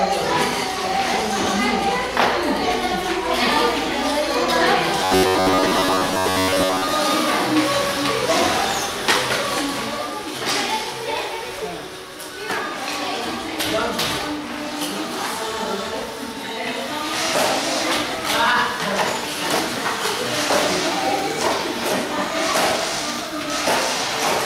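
From 5.04 to 6.93 s a rigid, metallic 93.8 Hz buzz appears. This is robotic sound, likely from repeated short buffers of about 11 ms, and it shows as evenly spaced harmonic stripes and roughly repeating waveform cycles.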